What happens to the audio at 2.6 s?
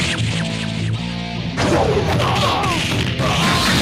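Nothing goes wrong at 2.6 s; the audio there plays through intact, with no dropout, click or other fault.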